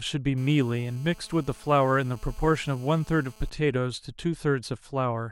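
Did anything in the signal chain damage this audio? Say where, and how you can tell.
Yes. From 0.38 to 3.50 s a hard, raspy buzz sits under the speech, about 28 dB below it, steady at 217 Hz with dense harmonics. This is GSM phone buzz entering the analogue wiring: a nearby 2G phone on a call pulses its transmitter, and the audio circuitry rectifies those bursts.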